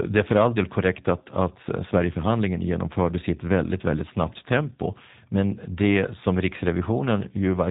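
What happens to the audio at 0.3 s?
At 0.3 s you're hearing G.729 codec damage, present throughout: speech rebuilt from a vocal tract model with sparse pulses, so it sounds plainly rough and synthetic. Nothing above 3.8 kHz survives, which fits an 8 kbit/s coder.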